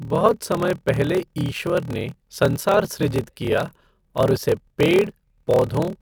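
Speech with a steady buzz at about 38.3 Hz throughout and a slowdown to 0.889 times normal speed at unchanged pitch: a padded block size mismatch, where zero-filled gaps follow each short block, consistent with 1024-sample writes.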